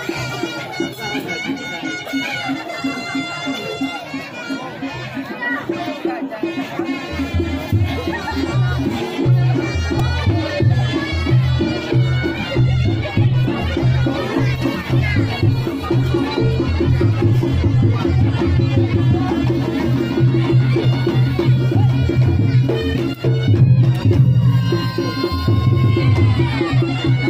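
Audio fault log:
10.00 s, repeated buffer: a tiny slice of sound plays three times in a row with hard joins, heard as a brief buzzy click. That fits a 128-sample buffer of about 2.67 ms being replayed while new audio ran late. The repeated material, not silence, sets it apart from a plain dropout.
12.27 to 18.15 s, call bitrate drop: the sound turns rough, watery and duller for nearly six seconds, then clears. This points to the encoder being pushed from around 128 kbps down to around 17 kbps and coding coarsely. The grainy texture and the recovery distinguish it from a fixed low-pass filter.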